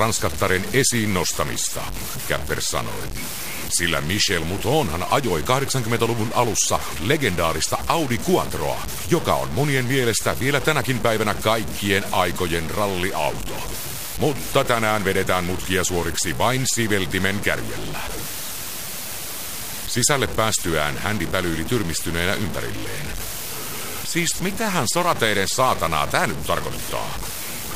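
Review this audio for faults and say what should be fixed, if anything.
Low bit depth without dither, throughout: grainy distortion follows the sound, quiet parts turn gritty, with error only about 10 dB down, likely from 5-bit truncation. Keep a higher bit depth, and apply dither before any reduction in word length.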